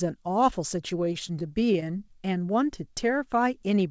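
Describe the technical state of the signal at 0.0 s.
At 0.0 s the speech is intact, with no fault present, and it carries the band limit of the call path it passed through, nothing above 8 kHz, as a G.722 call codec would leave it.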